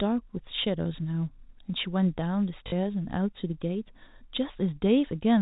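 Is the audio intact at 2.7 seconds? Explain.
No. From 2.68 to 2.72 s, packet loss with the last packet repeated fills a 40 ms gap, giving a brief robotic stutter.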